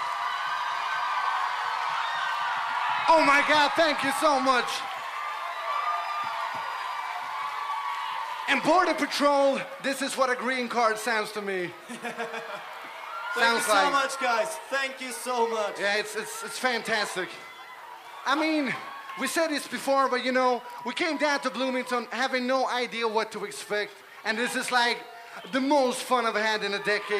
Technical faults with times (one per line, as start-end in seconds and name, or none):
none